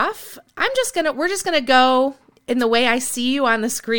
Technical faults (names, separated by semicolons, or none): wireless microphone noise hit